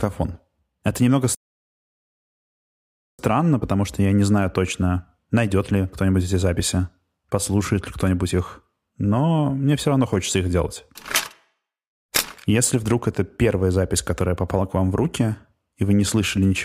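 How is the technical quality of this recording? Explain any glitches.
The recording has one clear glitch, a playback stall. From 1.35 to 3.19 s the speech drops into silence for 1.84 s, likely because the player ran out of buffered data or its thread was blocked, before resuming. A waveform would show a flat gap, and a spectrogram a blank vertical band.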